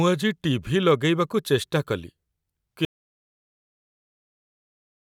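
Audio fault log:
2.85 s to the end: audio dropout to silence. The input feeding the recorder was likely lost through a disconnected device, a failed link or a mute, while writing carried on with silence. The speech cuts off mid-flow at 2.85 s and never returns, leaving over two seconds of silence with no room tone, hiss or background underneath, so whatever was spoken in that stretch is simply gone rather than muffled.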